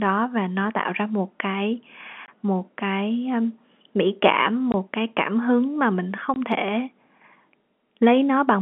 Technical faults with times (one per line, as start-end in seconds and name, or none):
2.26-2.28 packet loss filled with silence
4.72-4.74 packet loss filled with silence
6.34-6.36 packet loss filled with silence